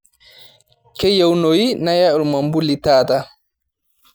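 No technical faults can be heard anywhere in this speech recording. There is no moment in it that needs a time stamp or an explanation.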